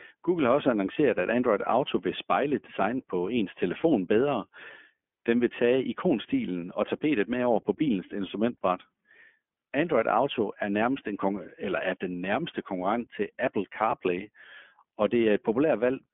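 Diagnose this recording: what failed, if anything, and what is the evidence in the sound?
What failed is the codec stage: the whole clip has gone through the iLBC codec. The speech is band-limited to roughly 200 Hz to 3.4 kHz, with nothing at all above 3.6 kHz, and there's a plainly audible rough, slightly synthetic grain from start to finish. iLBC codes each short frame's excitation on its own, here consistent with 20 ms frames at a 15.2 kbps rate, so you lose the top end and some naturalness.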